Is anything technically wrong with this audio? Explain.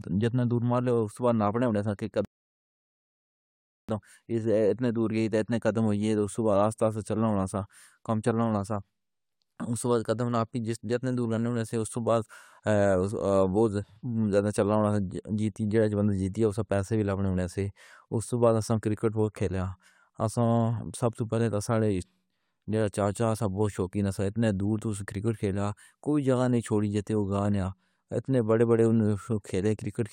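Yes, there is one fault. From 2.25 to 3.89 s a rebuffering stall halts the speech: the player ran dry of downloaded audio and waited, adding about 1.64 s of silence. Playback then resumes exactly where it stopped. The waveform shows a flat line and the spectrogram a blank vertical band.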